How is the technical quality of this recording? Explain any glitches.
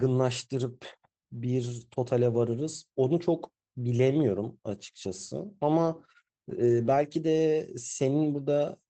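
The speech has one glitch, carried over a call path using Opus at 24 kbps with audio limited to about 8 kHz.

From 6.65 to 6.91 s there is a lost packet rebuilt from error correction. About 140 ms, which fits a run of roughly seven 20 ms packets, plays from each packet's low-bitrate copy carried in the next packet, so it sounds rougher and noisier. Unlike plain concealment, there is no gap or smeared repeat.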